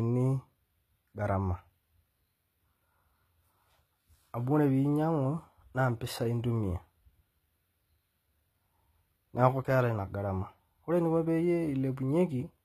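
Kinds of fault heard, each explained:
HE-AAC compression: s sounds come out clearly gritty, the treble sounds copied up from below and nothing survives above 14.9 kHz, likely band replication at around 20 kbps.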